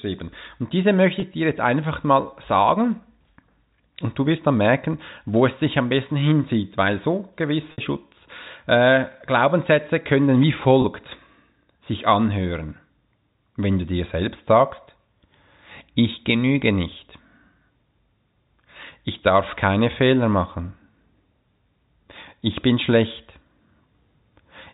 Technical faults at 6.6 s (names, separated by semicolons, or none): none